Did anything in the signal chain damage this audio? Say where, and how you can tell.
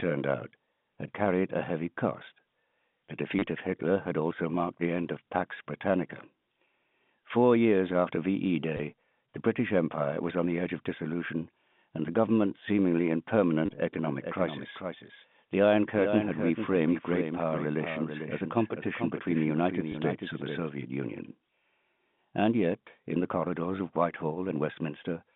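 Yes. Packet loss with last packet repeated, a network-stage fault, occurs at 3.39–3.42 s, 8.77–8.79 s, 13.66–13.69 s (just after "the government seemingly in") and 19.92–19.94 s. Each is a brief robotic stutter of 20 or 30 ms, where the receiver filled missing audio by replaying the last packet it had. The repeat buzzes briefly, consistent with roughly 10 ms packets.

A doubled audio track runs from 14.04 s to 20.70 s. A second full-band copy of the audio trails the original by roughly 0.4 s at about 5 dB lower. It carries no reverberant tail or room colouring, and it starts and stops abruptly, so it is not an acoustic echo. The likely cause is the same signal being captured a second time through a slower path in call processing or recording and mixed back in. It sits within the same 150 Hz to 3.6 kHz telephone band as the G.711 line.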